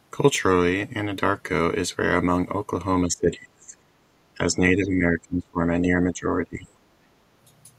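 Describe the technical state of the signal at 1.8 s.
At 1.8 s the speech signal is intact, with no technical fault audible at that moment.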